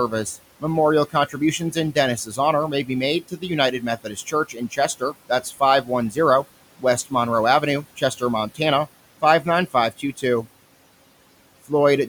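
Noise suppressor artifacts run through the whole clip. The suppressor lowers every band it judges to be steady noise by about 18 dB, frame by frame. The room noise, about 19 dB below the speech, therefore sinks in the pauses and rises under the voice.

Speech cut by the noise suppressor happens at 1.1–2.38 s (just before "honor may be"), 3.21–3.44 s (right after it), 3.8–6.45 s, 6.78–7.13 s, 7.61–8.22 s and 9.22–10.47 s. The suppressor mistakes quiet speech for noise and turns it down by about 11 to 18 dB. It does this only in short stretches within each span, totalling around a tenth of a second up to roughly 0.7 s, so soft consonants and endings come out faint or swallowed.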